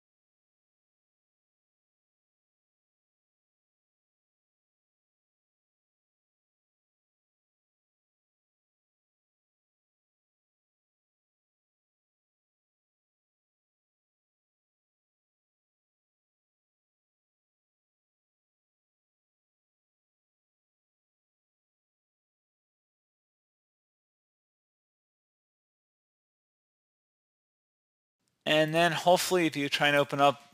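Nothing technically wrong can be heard anywhere in this audio. There are no faults to time or trace to a cause.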